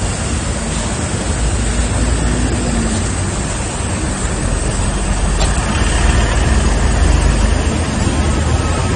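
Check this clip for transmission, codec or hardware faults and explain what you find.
One codec fault runs through the whole clip: AAC compression.

From start to finish the sound is dull and smeared, with nothing above 9.7 kHz. The damage is plainly audible and points to AAC-LC at a low bitrate around 32 kbps. The likely cause is that the encoder, short of bits, dropped its cut-off and coarsely quantised the remaining frequency lines against its hearing model. A spectrogram would show a hard ceiling at 9.7 kHz with patchy, gappy energy below it.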